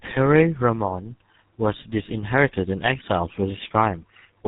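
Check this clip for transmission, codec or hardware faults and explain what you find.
One fault runs through the whole clip: tandem speech coding. From start to finish the speech sounds rough, muffled and warbly, with nothing above about 3.8 kHz. The call passed through G.723.1 at 6.3 kbit/s, then G.711 mu-law, then GSM full rate at 13 kbit/s. Each border meant decoding and coding again, so two low-rate speech coders in a row stacked their errors, with the GSM coder modelling an already smeared signal.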